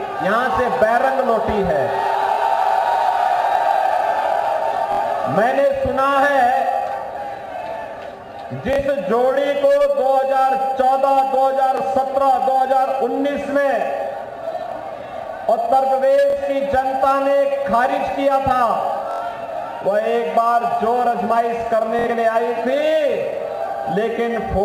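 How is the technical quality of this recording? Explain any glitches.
The recording has seven brief Bluetooth stutter dropouts, at 2.35 to 2.38 s, 4.93 to 5.00 s, 8.73 to 8.80 s, 11.77 to 11.81 s, 16.30 to 16.36 s, 19.11 to 19.22 s, and 21.99 to 22.08 s. When packets on the wireless link arrived late or not at all, the receiver replayed its last slice of about 23 ms until fresh data came. The gaps run 23 to 93 ms, which fits one to four lost frames. The longer runs, worst near 19.1 s, become a short buzzing stutter before the sound resumes slightly further along, as though it had kept playing.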